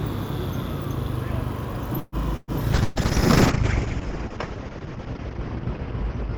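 At 1.99 s the sound stalls until 2.15 s. The last moment is drawn out as a fading continuation for about 130 ms, with a brief silence, and then resumes where it stopped with nothing lost. This is a call audio freeze, likely caused by delayed packets draining the jitter buffer.

A burst of packet loss follows at 2.36 to 2.51 s. The receiver fills about 113 ms with a decaying continuation of the preceding sound, then jumps ahead, skipping roughly 180 ms of audio. A second burst at 2.84 to 2.99 s behaves the same way: 120 ms of concealment and 120 ms missing.

From 2.73 s to the end there is a call bitrate drop, from 96 kbps down to 7 kbps, held at its lowest for about 2.4 s. The encoder codes coarsely and narrows the bandwidth from 20 kHz to 8 kHz, leaving the sound rough, watery and dull.

Between 4.02 and 4.64 s a jitter buffer slow-down stretches the audio by about 53 ms, playing at about 92% speed. 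Repeated pitch periods lengthen the sound without changing its pitch, giving a drawn-out quality.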